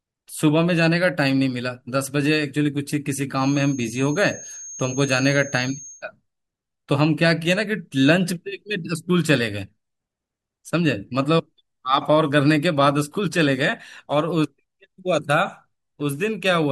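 From about 3.34 to 6.05 s there's a feedback whistle sitting behind the speech: a thin, steady tone at 6.5 kHz, roughly 20 dB under the speech, swelling and fading slowly in level. The likely cause is the loudspeaker-to-microphone loop hovering right on the edge of feedback, so that single high frequency keeps ringing without building into a full howl. It never runs away into a howl.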